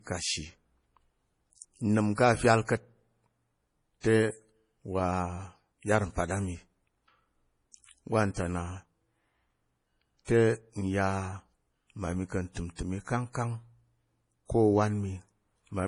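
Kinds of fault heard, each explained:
Low-bitrate audio saved at a high bitrate: the speech has nothing above 10.5 kHz and carries coarse coding artefacts throughout, likely from an earlier low-bitrate MP3 pass around 32 kbit/s later re-encoded near 192 kbit/s, which cannot restore the removed detail.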